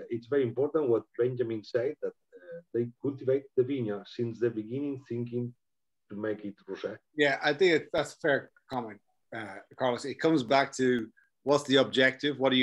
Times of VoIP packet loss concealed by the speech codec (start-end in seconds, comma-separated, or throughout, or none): none